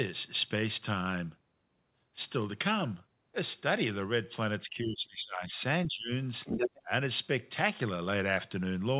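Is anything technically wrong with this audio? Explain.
Yes. Speech suppressed in double talk occurs from 4.64 to 5.53 s, again from 5.87 to 6.11 s, and briefly from 6.83 to 6.90 s. The likely cause is an echo canceller that, with both sides talking at once, could not tell the local talker from loudspeaker echo and attenuated everything. The speech dips sharply, by roughly 20 dB in the first two stretches and about 15 dB in the last. For about 1.3 seconds in total it sounds pushed away or partly cut out.

The other side's voice leaking through is audible from 6.45 to 6.81 s. A second voice comes through the microphone at roughly the same level as the main talker, so it is hard to miss. The probable mechanism is loudspeaker playback that the echo canceller failed to remove. Here that residue sits just before the last suppression dip at 6.83 s. The whole clip is band-limited to nothing above 4 kHz, which fits a 64 kbps G.711 mu-law call path.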